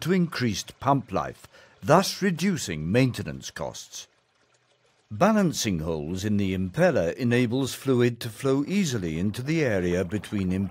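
Nothing in the recording stood out as a technical problem on listening.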